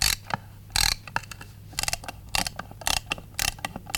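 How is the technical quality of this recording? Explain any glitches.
The recording has one clear fault: periodic USB or driver dropouts. From 1.04 s to 3.77 s, regular ticks recur every 0.248 s. Each time, something stalls the USB bus or audio driver and a couple of milliseconds of audio are skipped outright, so the waveform jumps and clicks at the splice. The metronome-like spacing, and the fact that the ticks sound only while signal is present, distinguish this from random crackle or bursts of digital clipping.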